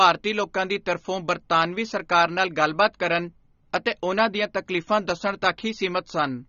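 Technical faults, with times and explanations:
Throughout: AAC compression. The speech sounds dull, with nothing above 7 kHz. The codec damage is plainly audible. Sibilants are smeared and fizzy, and sustained sounds warble. The likely cause is a low-bitrate AAC-LC encode, and the sound fits about 24 kbps. At that rate the encoder lowers its cut-off to save bits. It also quantises the remaining frequency lines coarsely, leaving gaps that shift from frame to frame.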